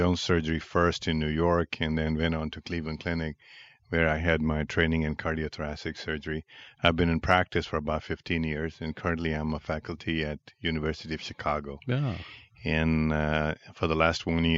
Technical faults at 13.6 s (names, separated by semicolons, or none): none